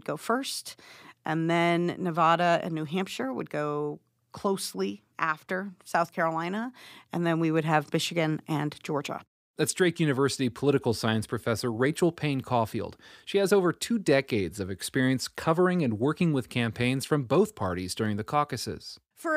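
No technical faults can be heard anywhere in the speech recording; the signal stays steady and continuous throughout.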